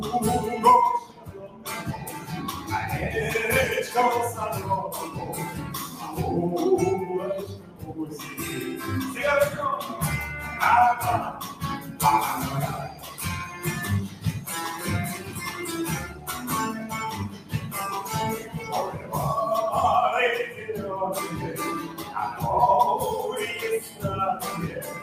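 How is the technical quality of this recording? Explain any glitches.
The recording is compromised by a speech-oriented noise suppressor left running on non-speech material, which makes the level unstable throughout.

Noise suppressor applied to music or sounds: for the whole clip, the suppressor treats sustained and ambient content as noise, so gain swings by around 10 dB. Onsets get through, but held sound and decays are pulled down, giving a pumping, thinned character. On a spectrogram, steady energy and reverb tails look patchy and eroded while transients stay sharp. The waveform envelope breathes unevenly.

Sound cut by the noise suppressor: deeper dips occur at 1.04–2.29 s (about 10 dB), 5.87–6.02 s (about 6 dB), 7.53–8.34 s (about 10 dB), 11.33–16.29 s (about 9 dB, in intermittent stretches), 17.29–19.12 s (about 10 dB), 20.52–20.69 s (about 7 dB), 21.88–22.14 s (about 7 dB), and from 23.84 s to the end (about 9 dB). 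In each, the suppressor judged the sustained or fading material to be noise and attenuated it harder. The sound sinks or its tail is chopped short. These appear as darkened, hollowed-out bands on the spectrogram and as sudden envelope troughs in the waveform.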